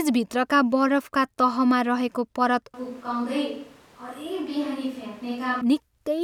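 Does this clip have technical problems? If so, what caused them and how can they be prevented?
Yes. From 2.74 s to 5.61 s, right after "बरफका तहमा रहेको परत", the speech abruptly turns roomy and hollow, loses bass, drops by roughly 10 dB, and room noise rises to about 25 dB below the speech. The likely cause is a switch to a distant microphone, with a far-off pickup replacing the close one. A simple gain dip would not change the tone or bring in the room, and added reverb would not thin the bass or raise the noise. Monitoring the close microphone's feed and checking its connection and battery before recording prevents this.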